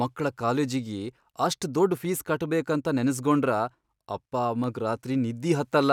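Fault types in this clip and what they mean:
Dropped samples: Three isolated sharp clicks cut through the speech, each a thin vertical line in the spectrum. The first is at 1.09 s, between "ಮಕ್ಳ ಕಾಲೇಜಿಗಿ" and "ಅಷ್ಟ್ ದೊಡ್ಡ್". The second is at 2.05 s, right after "ಅಷ್ಟ್ ದೊಡ್ಡ್". The third is at 4.64 s. The likely cause is a tiny run of samples, a small fraction of a millisecond, missing from the stream, so the waveform jumps abruptly to a later value without any audible gap.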